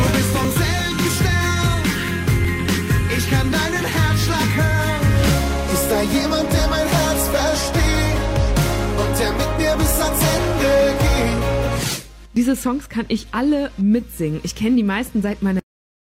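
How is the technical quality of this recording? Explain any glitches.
The recording has two kinds of technical glitch: repeated small skips from overlap between stream segments, and a cut-off end.

The skips fall at 0.45–0.48 s, 2.45–2.47 s, 4.43–4.46 s, 12.37 s and 14.34–14.38 s, spaced at multiples of about 2 s, which fits a stream delivered in 2-second segments. Adjacent segments carried overlapping timestamps, and the player trimmed the overlap from sound that was never actually duplicated, discarding roughly 15 to 35 ms each time. The ear hears a brief click or hiccup. On a waveform the trace jumps abruptly at each point, and a spectrogram shows a thin vertical broadband line there.

At 15.59 s the audio has a cut-off end. It stops mid-sound, most plausibly because the final buffers were never written out. There is no fade or decay, just an instant drop to digital silence for the remaining fraction of a second. 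The waveform ends in a sharp vertical edge followed by a flat line, and the spectrogram goes from full energy to blank with a brief broadband smear at the cut.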